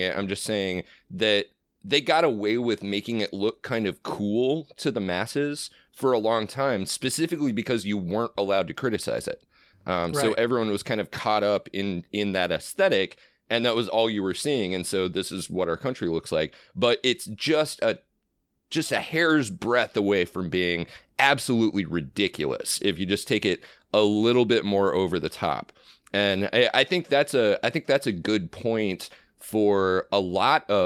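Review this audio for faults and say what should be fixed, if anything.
Nothing stood out on listening to this speech recording, so there is nothing here that needs fixing.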